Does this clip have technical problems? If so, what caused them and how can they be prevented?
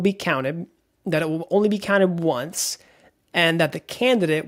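No, nothing here points to a technical problem, so there's nothing to track down or guard against this time.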